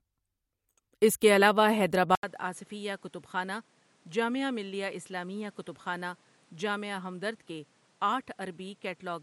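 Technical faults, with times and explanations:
2.15 to 9.23 s, input likely switched to a poorer device: After "اس کے علاوہ" there is an 80 ms silence. The speech then returns about 10 dB quieter, with nothing above 11.4 kHz and new background noise roughly 30 dB below it. Another input device explains all three changes.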